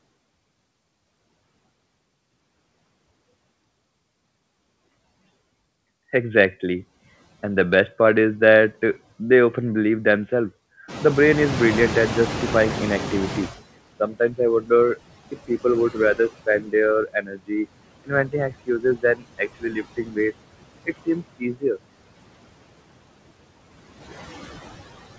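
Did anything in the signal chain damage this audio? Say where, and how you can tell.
Yes. The damage happens in call processing, at the noise suppressor. Noise suppressor artifacts run through all of the audio. The background is pulled down by about 21 dB between phrases and comes back up underneath them, so the residue pumps with the speech. That movement in step with the speech rules out codec coding noise, which stays steady. The band limit near 8 kHz fits a G.722 call path and is separate from this fault.

Noise suppressor catching up begins at 10.88 s, just after "they often believe themselves". At about 11 s the room noise rises by roughly 19 dB. For about 2.7 s after that, the louder noise gets through with little reduction, and by 13.61 s it has been brought down by about 17 dB. The louder room noise is real. The fault is the slow, gradual fade, which shows the suppressor's noise estimate lagging behind the new level.

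Speech cut by the noise suppressor follows at 14.0–14.98 s, 15.31–16.73 s, 17.08–17.51 s, 18.04–20.33 s and 20.86–21.79 s. Parts of the speech drop by about 13 to 21 dB, for roughly a third of a second in most spans and about a second in the longest. The affected speech sounds swallowed or faint. A dropout or packet loss cuts everything to silence, but here the background keeps going through each dip. That shows the suppressor mistook quiet speech for noise.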